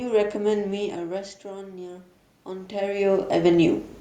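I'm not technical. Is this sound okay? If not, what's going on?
No. From about 1.43 to 3.85 seconds, the voice and the room noise behind it slowly swell louder together. This is automatic gain rising: the input got much quieter, partly as the talker moved, and the recording system gradually turned its volume up to compensate.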